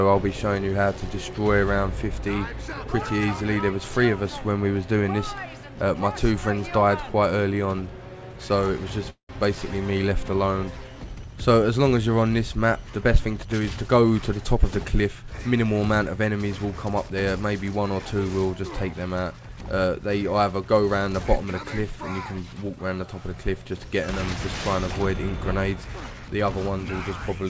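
A call audio freeze, likely from packets stalling in transit and draining the jitter buffer, interrupts the audio from 9.10 to 9.31 s. The receiver fills roughly 0.19 s, of which about 0.11 s falls silent, then resumes where it stopped, so nothing is lost but everything after shifts later. A jitter buffer speed-up follows from 13.18 to 15.66 s, as the buffer sheds excess delay by cutting short pitch-period fragments repeatedly, about a fifth of a second in total. The audio runs about 8% faster at unchanged pitch and sounds hurried. Throughout, the band stops at 8 kHz, consistent with a wideband call codec such as G.722.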